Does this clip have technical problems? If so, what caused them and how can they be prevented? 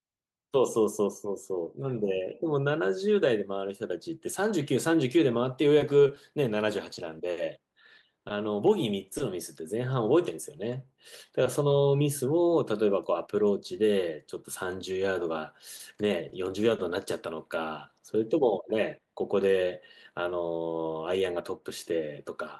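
Yes. Scattered short gaps at 5.79–9.22 s (about seven, 60 ms missing) and 15.77–16.81 s (about three, up to roughly 30 ms each). Lost or late packets were patched by extending the preceding sound, leaving brief ticks and smears in the speech. A larger jitter buffer, forward error correction, or a more stable network connection would prevent this.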